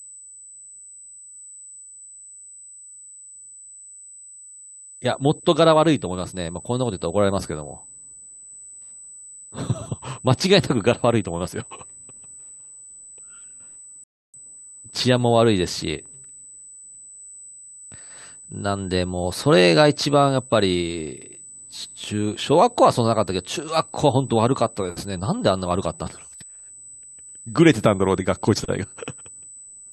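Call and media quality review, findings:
USB whine throughout: steady 8 kHz tone, about 20 dB below the speech. Probable cause is USB power or ground coupling into the analogue path; 125-microsecond microframe current draw modulates the supply. On a spectrogram, an unbroken horizontal line at 8 kHz.

Rebuffering stall at 14.04 to 14.34 s: playback drops to silence, then resumes at the same point with nothing missing and 0.3 s added. Probable component is the player buffer running empty before more data arrived. On a waveform, a flat gap with no cut content.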